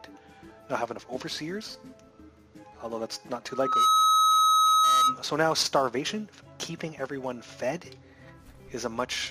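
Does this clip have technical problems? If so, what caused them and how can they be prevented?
Yes. A loudspeaker feedback squeal at 1.3 kHz runs from 3.49 to 5.20 s, swelling within about 0.4 s to roughly 10 dB above the sound. The microphone picks up its own loudspeaker, and at that frequency the loop gain exceeds one. Unlike a steady interfering tone, it builds by itself. Lowering gain or separating microphone and loudspeaker prevents it.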